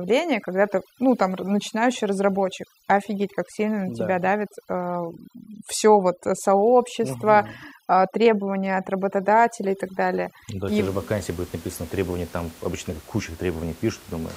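From 0.00 to 10.67 s, overdone noise removal drops the background and breaks it into twinkling specks, and quiet parts of the speech are cut away. Unlike codec swirl, the artefacts follow the room noise, about 24 dB below the speech.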